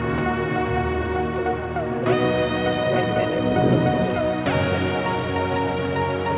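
Nothing technically wrong can be heard in this audio.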